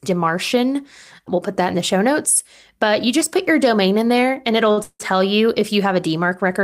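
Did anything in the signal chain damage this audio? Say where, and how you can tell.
Yes. A late packet caused a short stall at the network and jitter buffer stage at 4.71 to 4.79 s, just after "in there and it'll". The buffer ran dry and the receiver stretched the last sound for about 57 ms until the packet arrived. The held sound is audible, nothing is lost, and everything after it is pushed back 57 ms.

Almost immediately there is a call audio freeze from 4.83 to 5.02 s, ending just before "you if you". The likely cause is packets held up in the network, emptying the jitter buffer again. The last sound is carried on as a fading fill for 164 ms, including about 50 ms of silence. Playback then resumes where it stopped, with nothing missing but a gap inserted.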